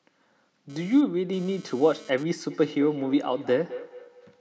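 From 0.70 s to 2.23 s, a nearby 2G phone moving data pulses its transmitter about 217 times a second, and the audio circuitry rectifies those radio bursts. The result is GSM phone buzz: a raspy 217 Hz drone, rich in harmonics, about 26 dB below the speech, cutting in and out.

From 2.50 s to the end, a second device on the same call in the same room plays back what this microphone sent, and the microphone picks it up again, beyond the reach of either echo canceller. This feedback echo between two devices brings the speech back roughly every fifth of a second, each repeat thinner and more ringing, the loudest about 17 dB below the speech.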